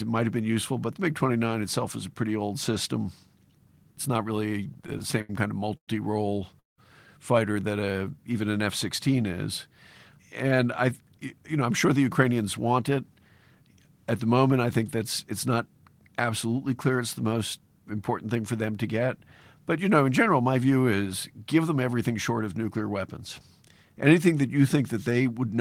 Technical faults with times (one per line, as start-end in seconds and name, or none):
4.48-5.30 repeated stalls (stutter)
5.77-5.89 call audio freeze
6.60-6.79 call audio freeze
7.92-8.15 jitter buffer slow-down
10.19-12.81 jitter buffer speed-up